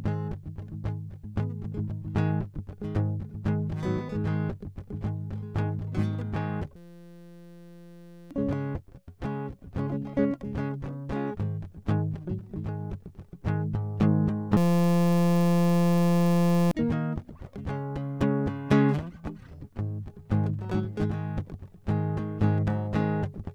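A music clip with two system hang loops, 6.76–8.31 s and 14.57–16.71 s. Each time, a 5.8 ms piece, which fits a 256-sample buffer, repeats as a 172 Hz buzz, replacing about 1.5 s and 2 s of music. On a spectrogram this shows as flat harmonic stripes at multiples of 172 Hz; the waveform shows identical repeating cycles.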